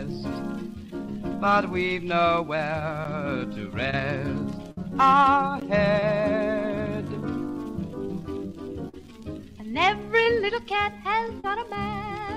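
At 3.04 s there's a block of digital silence, about 10 ms where the output buffer likely wasn't filled in time and the sound dropped straight to silence. With no fade at either edge, it comes across as a sharp little tick. The same thing happens at 5.6 s, this time about 15 ms long, so it still comes across as a tick or dip rather than a hole.

From 3.90 to 3.94 s you get a short concealed packet loss. About 20 ms of audio never arrived, and the receiver papered over it by extending the last sound before blending back in, which leaves a quick smear. It recurs at 6.00–6.03 s, 8.89–8.94 s (a longer one, about 40 ms missing), 10.23–10.26 s and 11.40–11.45 s (again about 40 ms).

At 4.72–4.78 s there's a burst of packet loss. Roughly 50 ms went missing in one go, so the concealment had to stretch the previous sound further, letting it fade as the gap wore on. You hear a held, dying buzz or hiss, then the audio picks up slightly further along with that stretch gone.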